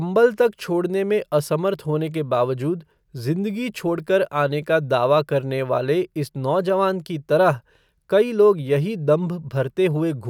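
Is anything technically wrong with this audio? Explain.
No, nothing technically wrong can be heard in this speech recording. There is no fault in it to explain.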